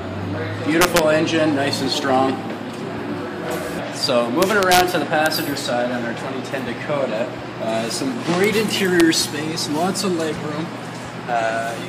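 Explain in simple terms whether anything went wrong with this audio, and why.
Sharp cracks hit the loudest moments at 0.81–0.99, 4.42–4.81, 5.26, 8.44 and 9.00 s. This is integer overflow: peaks too big wrapped to the opposite extreme.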